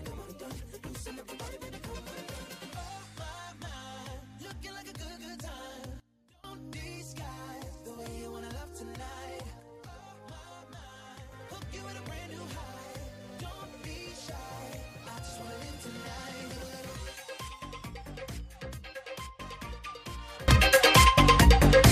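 Sudden gain jumps occur at 6.00 to 6.44 s (down about 22 dB), 9.60 to 11.32 s (down about 6 dB), and 20.48 s to the end (up about 23 dB). Sound and background noise shift together instantly, likely a digital gain change applied without a ramp.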